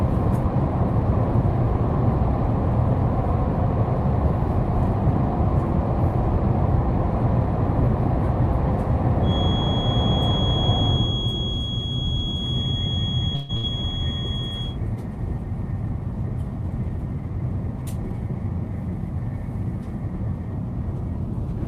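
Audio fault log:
13.35–13.51 s, call audio freeze: the last sound stretches into a fading buzz or hiss for 136 ms, likely from late packets; the spectrogram shows a smeared, dimming band, and nothing is lost.
13.57–13.65 s, burst of packet loss: about 60 ms is gone, covered by a decaying repeat of the preceding sound; the waveform tapers, then jumps ahead.
15.44–17.40 s, jitter buffer speed-up: sound plays at 106% with pitch unchanged as tiny pitch-period slices are cut, around a tenth of a second in total; the spectrogram looks slightly compressed in time.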